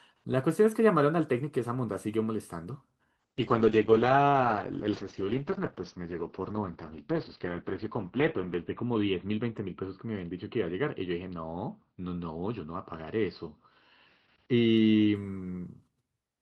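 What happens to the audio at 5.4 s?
At 5.4 s the speech is inside a call bitrate drop running from 3.21 s to 15.21 s. It sounds rough and muffled, consistent with the encoder falling from around 48 to 8 kbps. A spectrogram shows content above 4 kHz cut off.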